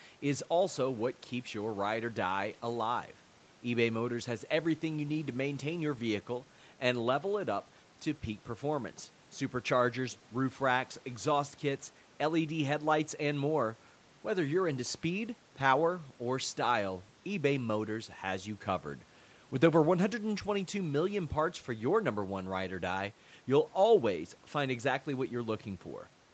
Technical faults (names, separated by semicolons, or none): none